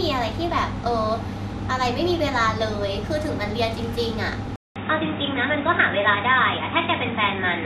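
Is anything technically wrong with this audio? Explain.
Yes, there are two problems. From start to finish the speech carries what sounds like MP2 compression: nothing comes through above 14.2 kHz, and the remaining bands have a gurgly, grainy edge. That's Layer II shutting off its top sub-bands and coarsely quantising the rest, which points to a low bitrate around 80 kbps.

At 4.56 s there's a gap of about 200 ms, and from there to the end the sound turns narrow and boxy, with nothing above 3.8 kHz and a new noise floor roughly 35 dB down. The level doesn't really change. The likely cause is the input switching to a poorer device, such as another mic or a headset's call profile.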